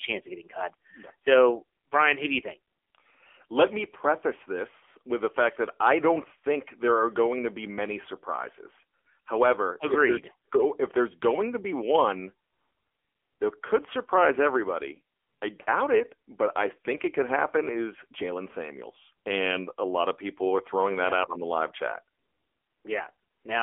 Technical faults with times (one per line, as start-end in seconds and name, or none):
0.00-23.63 AMR narrowband mobile codec